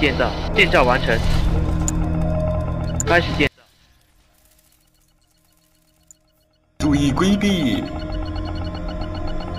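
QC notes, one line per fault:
3.47–6.80 s, one channel inverted: the sound drops by about 36 dB and turns faint. The likely cause is reversed polarity on one side, so anything the two channels share cancels when summed to mono, leaving just their small difference.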